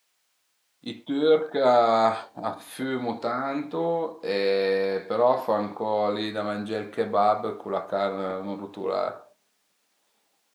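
No technical faults can be heard anywhere in the speech. At no point does the signal chain audibly break down or misbehave.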